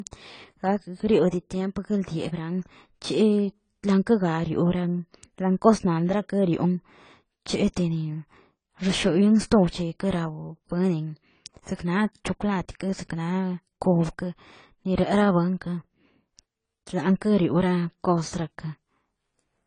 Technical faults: AAC compression

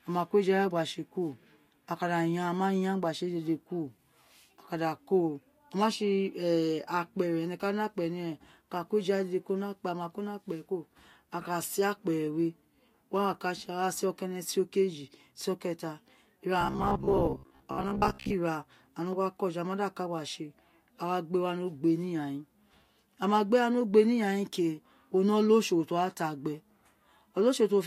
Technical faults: robotic sound from repeated short buffers

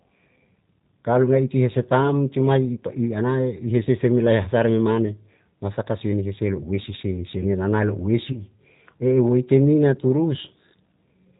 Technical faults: G.729 codec; VoIP packet loss concealed by the speech codec

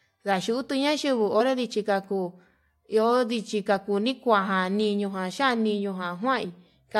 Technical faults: compressed frames skipped

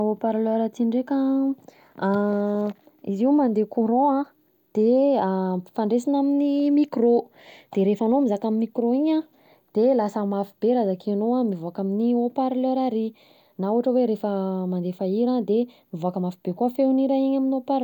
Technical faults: none

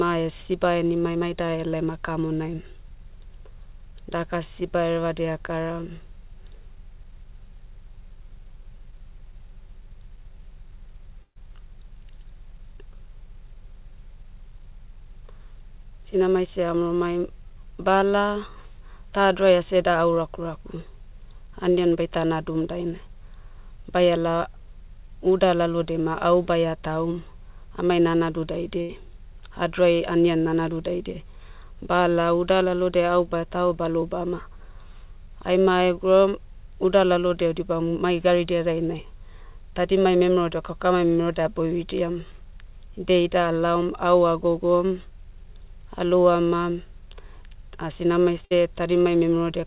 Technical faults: short concealed packet loss; burst of packet loss

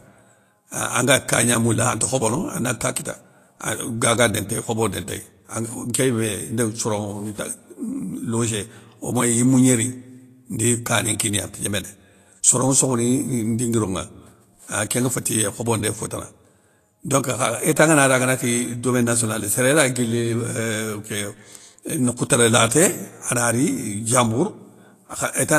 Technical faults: Vorbis compression

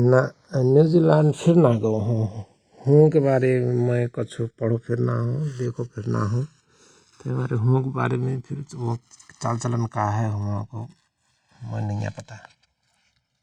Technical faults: channels drifting apart

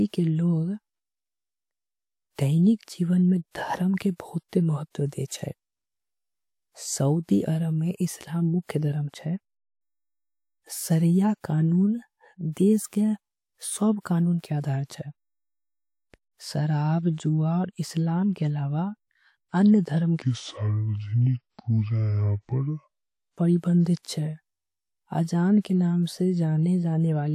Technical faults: pre-echo; section at the wrong speed

